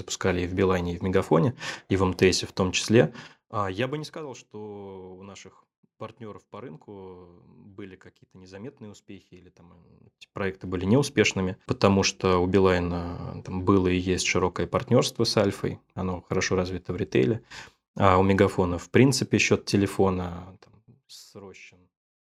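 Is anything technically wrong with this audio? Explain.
Yes. Zipper noise at 3.05–4.31 s (after "в том", before "что у наших партнеров"), 9.86–10.94 s and 20.18–21.38 s (after "в принципе счет"): speech level moves in unsmoothed 2 dB steps, roughly 10–15 per second. These steps bring it down about 20 dB, up about 20 dB and down about 25 dB, each step clicking into a ticking zip.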